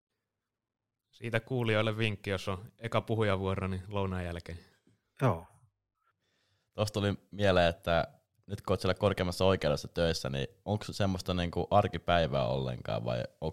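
Listening through the speech recording, nothing stood out as a technical fault at any point.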